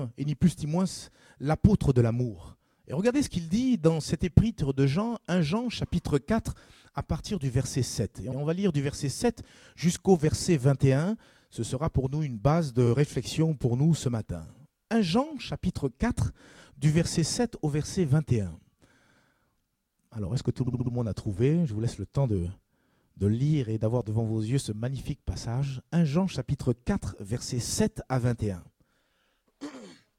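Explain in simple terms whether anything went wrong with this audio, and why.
Repeated frames: small chunks of the compressed audio were sent or stored more than once, so the player plays the same fraction of a second again. At 8.31 s a 64 ms chunk repeats once, and at 12.86 s a 43 ms chunk repeats once. At 20.66 s a 64 ms chunk plays four extra times, adding about a quarter second. Each repeat sounds like a brief stutter.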